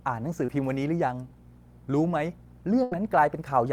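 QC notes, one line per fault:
Throughout: mains hum. There's a steady 60 Hz tone with a few low harmonics sitting roughly 25 dB under the speech. That points to a ground loop or a transformer nearby bleeding the power line into the signal path, so it never lets up.
0.45–0.49 s: short concealed packet loss. About 30 ms of audio didn't reach the decoder in time. The receiver stretched the last bit of sound over roughly 26 ms and blended back in, which gives a quick smear or wobble right there.
2.83–2.92 s: burst of packet loss. This is a longer gap, around 80 ms gone. The receiver carried the previous sound forward for about 83 ms while fading it down, so you get a held buzz or dying hiss before the speech picks up further along.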